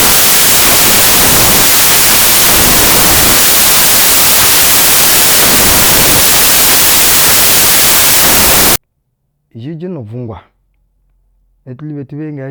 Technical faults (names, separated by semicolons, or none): samples built from the wrong bytes